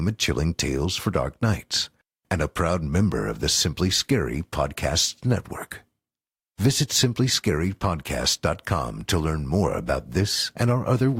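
No audible faults anywhere in the clip; nothing to flag.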